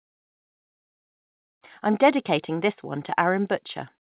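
No technical faults can be heard in the speech, which arrives through a narrowband call path with nothing above 4 kHz, consistent with a G.711 mu-law link at 64 kbps.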